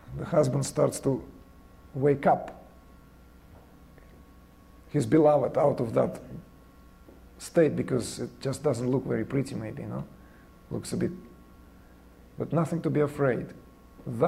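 No technical faults can be heard anywhere in the clip. The audio runs without interruption and with nothing that points to a problem in how it was captured or delivered.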